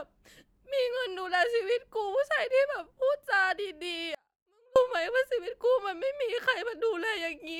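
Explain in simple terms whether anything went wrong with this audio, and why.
The signal path likely lost its connection briefly, causing an audio dropout to a faint residue: from 4.15 to 4.76 seconds, the speech vanishes, leaving only a faint trace.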